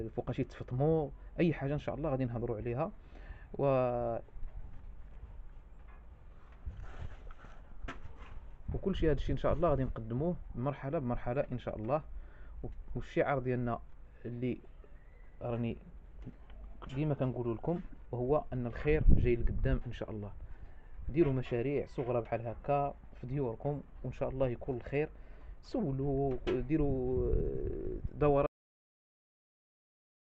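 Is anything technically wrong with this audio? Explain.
Yes. There is a cut-off end at 28.46 s: the final buffers were never written out or played, so the sound stops abruptly mid-event and falls straight to digital silence, with no natural decay, for the remaining 1.9 s.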